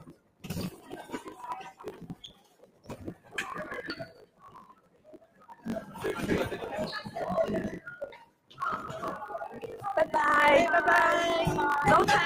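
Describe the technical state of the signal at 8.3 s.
Sound cut by the noise suppressor, 8.03 to 8.59 s, covers the moment at 8.3 s. A speech-oriented suppressor judged this passage to be noise and pulled it down harder than its surroundings, by about 17 dB at its deepest point. The steadier, sustained parts sink and their decay is clipped short, while any sharper onsets poke through. Counting the ragged edges, roughly 0.7 s of audio around this point is affected.

The same noise suppressor applied to music or sounds is active here as it is across the whole clip. Because it treats held tones, ambience and reverberant tails as noise to be removed, its gain keeps swinging, by something like 20 dB. Transients pass while anything sustained is ducked, so at 8.3 s the sound pumps and thins instead of holding a steady level.

A block size mismatch (truncated) also runs through this moment. One stage hands over longer blocks than the next one takes in, and each block's tail is discarded. 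The repeated discontinuity produces a 50 Hz buzz at the block rate, which fits 1024-sample blocks being written. The audio also plays 1.07 times fast, while its timbre stays about where it should be.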